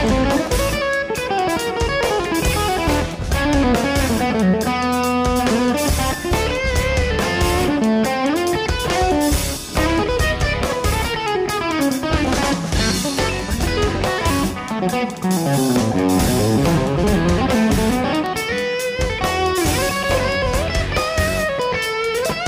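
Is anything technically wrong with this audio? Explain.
Yes. Two electrical switching spikes sit on top of the sound, one at 0.47 s and one at 18.26 s. Each is a sharp snap peaking around -15 dBFS, most likely a nearby switch or discharge arcing into the audio line. On a waveform each is a thin needle. On a spectrogram each is a narrow vertical stripe spanning the whole frequency range.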